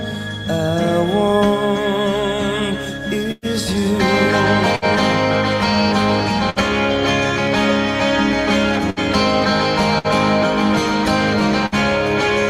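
The audio has six bursts of packet loss, at 3.31, 4.76, 6.50, 8.90, 9.98 and 11.66 s. Each time the receiver stretches and fades the last sound, then skips ahead. About 60 ms goes missing in each later burst. The first loses 120 ms and ends in brief silence.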